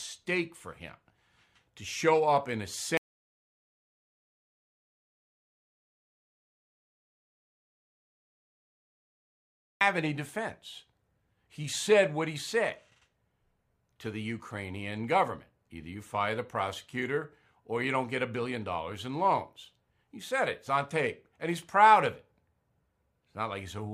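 The input to the recorder was likely lost, so silence was written: an audio dropout to silence cuts this speech clip from 2.97 to 9.81 s, erasing 6.84 s with no room tone left.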